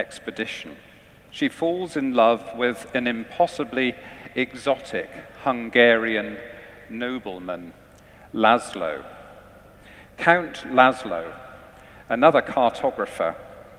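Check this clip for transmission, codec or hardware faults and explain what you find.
No transmission, codec or hardware faults turn up anywhere in the recording, and the signal holds steady throughout with nothing technically amiss.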